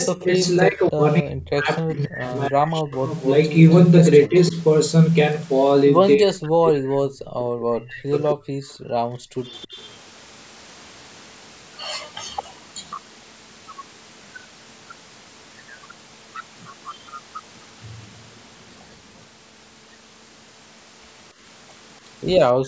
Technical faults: echo leak; speech suppressed in double talk; background gated by the echo canceller

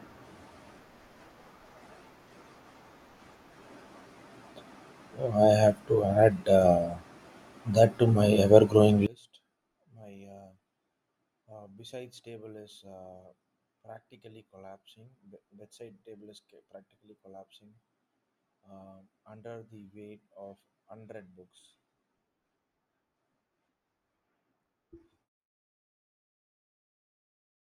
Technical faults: one channel inverted

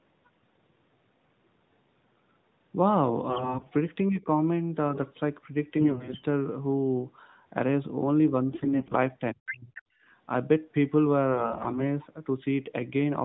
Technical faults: AMR bit errors; speech suppressed in double talk; other side's voice leaking through; background gated by the echo canceller

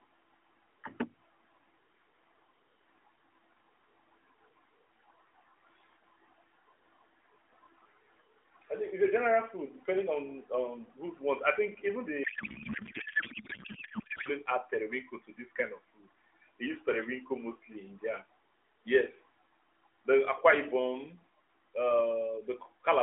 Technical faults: codec payload misread

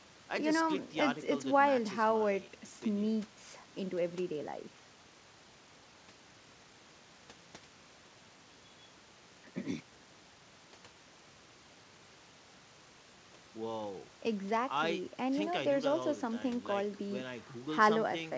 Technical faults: none

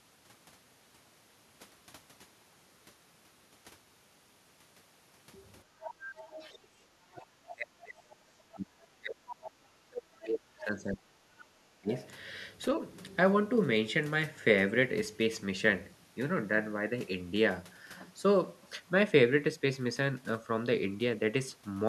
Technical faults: other side's voice leaking through; speech suppressed in double talk; background gated by the echo canceller

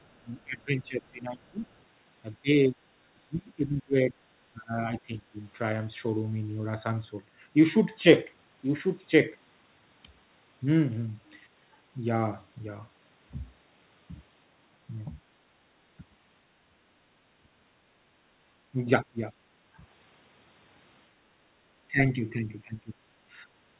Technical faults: other side's voice leaking through; speech suppressed in double talk; background gated by the echo canceller

